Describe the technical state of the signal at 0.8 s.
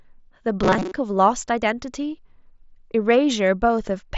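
At 0.8 s the signal is inside a stretch of robotic sound from repeated short buffers, running from 0.63 to 0.93 s. The speech becomes a rigid, metallic buzz locked at 188 Hz that still loosely tracks the words. The likely cause is audio arriving too seldom, so the playback side loops the most recent fragment, about half the material, to fill gaps. The 188 Hz pitch points to a loop of roughly 5.3 ms. The mSBC Bluetooth path still caps content near 7.7 kHz.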